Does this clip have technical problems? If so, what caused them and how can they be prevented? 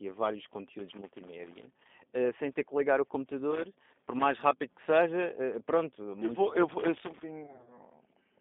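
Yes, three kinds. The whole clip carries G.729 codec damage: speech is squeezed into a 200 Hz to 3.6 kHz band and sounds plainly rough and synthetic, which fits an 8 kbit/s G.729A stream rebuilding the voice from a filter and a few pulses. Using a wideband codec such as G.722 or Opus would prevent it.

Loose connector crackle comes in three bursts: 0.79 to 1.93 s after "e a vários", 3.51 to 4.24 s between "ter que ligar o" and "rápido que", and 6.69 to 7.23 s after "muito vou eu". A worn contact keeps making and breaking, chopping the signal into scratchy crackle. Reseating or replacing the cable and cleaning the jacks would fix it.

VoIP packet loss concealed by the speech codec hits from 7.44 to 7.80 s. About 140 ms of audio went missing in gaps of up to 30 ms spread over 260 ms. The decoder fills them by stretching the last pitch into a buzzy, fading tone, and the voice stays weak for a moment afterwards. 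A steadier network, QoS priority for voice, or FEC would prevent it.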